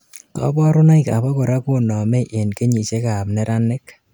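Nothing here trips any alarms, since the speech runs along without a single technical fault to point to.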